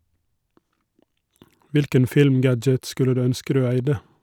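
Speech recording with no audible technical faults anywhere in it.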